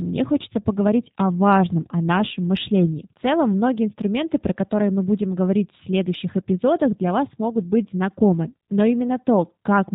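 From start to finish the speech sounds muffled and slightly buzzy, with a rough, synthetic edge that stays plainly audible throughout. This is the G.729 codec at work, and the sound fits its 8 kbit/s form. It discards the original waveform and rebuilds each 10 ms frame from a vocal tract filter, a pitch predictor and a few pulses. Everything above 4 kHz is gone, which takes away the crispness of the consonants.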